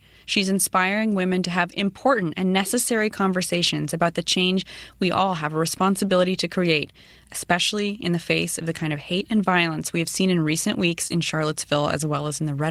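Just after "seen in recent weeks", at 11.07 to 11.13 s, there is a short concealed packet loss. About 20 ms of the stream arrived too late to decode, and the receiver covered the hole with 27 ms of synthesized continuation of the preceding sound before crossfading back into real audio. It is heard as a brief smear or wobble. On a spectrogram the last spectral shape stretches flatly across the gap, lacking the normal fine variation. The waveform shows a smooth stretch ending in the blend.

Inside that same stretch, from 11.10 to 11.12 s, there is a lost packet rebuilt from error correction. A 20 ms packet went missing, but the next packet carried a low-bitrate backup copy, so the decoder played that instead of leaving silence. The rebuilt frame is audibly rougher and grainier than its neighbours, a short patch of coarseness. A spectrogram shows a 20 ms block with a blurrier, noisier texture and weaker harmonic definition. 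The waveform stays continuous, with no gap.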